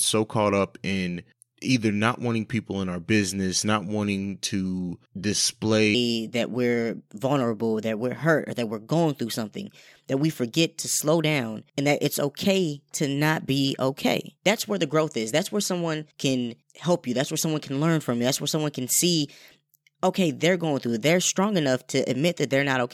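A section at the wrong speed runs from 5.95 s to the end of this speech recording: playback jumps to 1.22 times normal, raising pitch about three semitones, likely from resampling to a mismatched clock.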